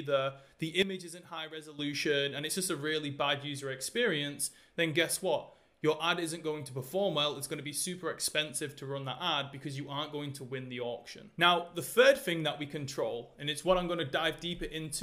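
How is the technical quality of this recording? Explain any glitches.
One glitch stands out. From 0.82 to 1.79 s there is a sudden gain jump. The level drops by about 11 dB, then snaps back. Background noise falls and returns with it. The likely cause is a gain change applied between two samples without a ramp.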